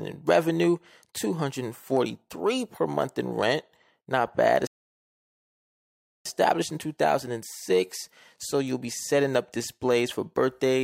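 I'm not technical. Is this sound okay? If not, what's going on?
No. A rebuffering stall hits at 4.67 s: the speech goes silent until 6.26 s, then picks up exactly where it stopped. The player used up its downloaded audio and waited for more, so nothing is missing, but about 1.6 seconds of dead air is added.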